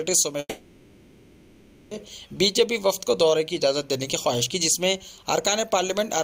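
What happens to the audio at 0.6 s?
At 0.6 s the clip is inside a long network dropout running from 0.39 to 2.06 s, likely a stretch where no audio packets reached the receiver. It fills about 1.5 s by extending the last sound into a fading buzz or hiss, then a brief silence before audio resumes with the lost portion gone.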